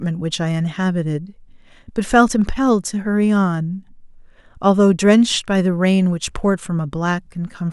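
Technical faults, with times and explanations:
Nothing technical gets in the way here; the speech comes through without any problems to point at.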